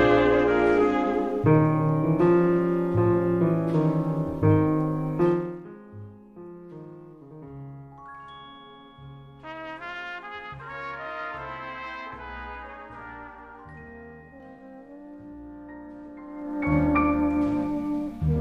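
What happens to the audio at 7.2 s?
Nothing goes wrong at 7.2 s; the audio plays through that moment intact.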